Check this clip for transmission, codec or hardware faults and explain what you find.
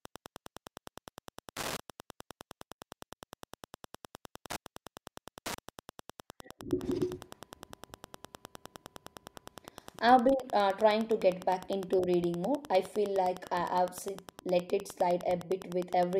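There's one fault in this speech recording. Wi-Fi interference runs the whole way through: a nearby radio's beacon, every 102.4 ms, gets rectified by the audio circuit into a steady ticking roughly 20 dB under the voice.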